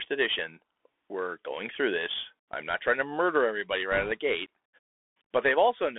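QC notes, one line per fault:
Throughout: Bluetooth CVSD headset codec, plainly audible. The speech is squeezed into a narrow phone band, roughly 300 Hz to 3.5 kHz, so it sounds thin. The one-bit delta coding can't keep up with loud high content, so s sounds come out scratchy with a grainy hiss underneath.
3.92 to 4.12 s: bit errors on a Bluetooth voice link. For about 0.2 s a rushing, crackly noise sits over the speech. No sharp clicks, since each flipped bit only nudges the signal slightly and the error fades out. The roughness fits an error rate of around 2 percent.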